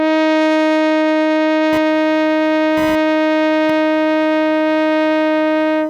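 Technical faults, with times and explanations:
1.73–5.90 s: computer activity noise. From here to the end, a thin buzzing chirp pulsing at around a thousand times a second sits roughly 25 dB below the music, its texture shifting independently of the playing. That independence points to the computer: as the processor, graphics card or mouse change their load, the current they draw moves the ground shared with the audio circuit, and that ground disturbance is heard as this buzz.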